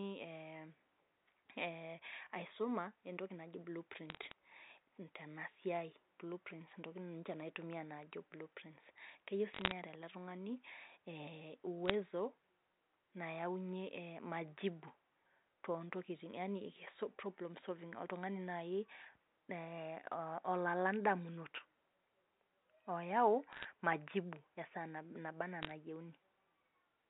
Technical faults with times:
4.10-4.32 bit errors on a digital phone line
9.53-9.72 bit errors on a digital phone line
11.85-11.94 bit errors on a digital phone line
23.52-23.66 bit errors on a digital phone line
25.62-25.72 bit errors on a digital phone line

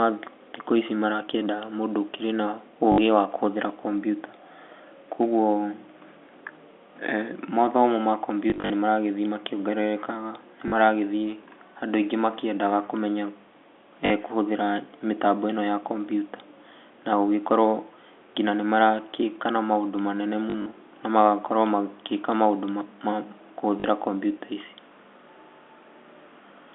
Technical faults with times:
2.92-2.98 packet loss with last packet repeated
8.50-8.70 packet loss with last packet repeated
10.68-10.72 packet loss with last packet repeated
14.06-14.10 packet loss with last packet repeated
20.50-20.66 packet loss with last packet repeated
23.80-23.84 packet loss with last packet repeated

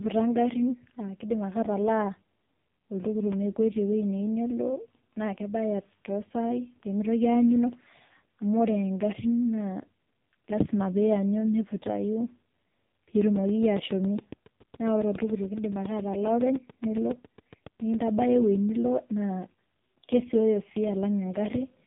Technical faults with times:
0.00-21.87 AMR narrowband mobile codec
13.21-18.23 train of clicks

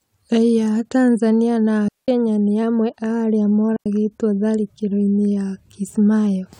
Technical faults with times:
1.88-2.08 digital wireless dropout
3.76-3.86 digital wireless dropout

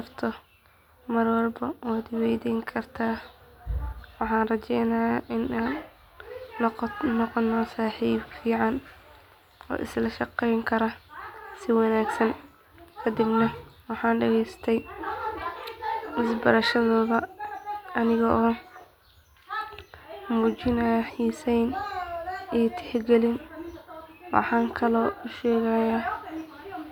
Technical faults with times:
none

